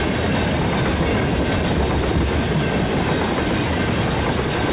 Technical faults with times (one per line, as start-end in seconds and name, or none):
none